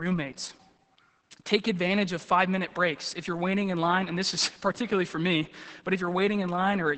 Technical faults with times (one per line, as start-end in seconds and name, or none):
0.00-6.97 Opus voice compression